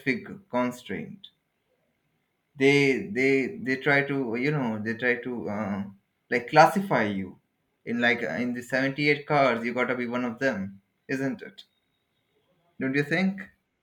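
From 7.57 s to 13.55 s the speech carries a regular tick, about four of them, spaced 2.0 s apart. These are periodic USB or driver dropouts: something stalls the USB link or the audio driver on a fixed schedule, and each time a sliver of audio well under a millisecond long is lost and replaced by silence. That tiny gap in the waveform becomes a small click.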